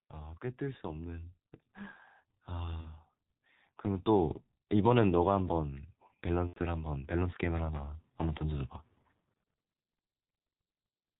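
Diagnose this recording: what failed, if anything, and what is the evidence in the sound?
The codec stage is at fault across the whole clip: G.723.1 compression. The speech is muffled and hoarse, with consonants smeared together, and the coarse quality points to the 6.3 kbit/s mode. On a spectrogram, energy stops at about 4 kHz, with nothing above. Formant tracks look blocky and step rather than glide, because the vocal-tract model is refreshed only once per 30 ms frame. This damage is heavy.

Network packet loss, concealed by the speech codec, appears twice. The first gap runs from 2.81 to 2.88 s, a span that fits one lost 30 ms frame. The second runs from 6.47 to 6.60 s, which fits three. In each gap the decoder keeps replaying its last pitch and filter at a falling gain, so the sound is stretched into a buzzy tone or a coloured noise that fades. The waveform envelope decays. The longer gap fades further, and the speech stays weak for a short while after each one.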